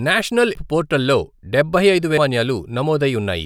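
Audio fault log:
0.55 s and 2.18 s: compressed frames skipped. At 0.55 s the speech jumps forward just before "పోర్టల్ లో డబ్బై", and at 2.18 s it jumps again just after "పోర్టల్ లో డబ్బై". Each time about half a second of audio is lost, which fits roughly seven frames of about 85 ms left out.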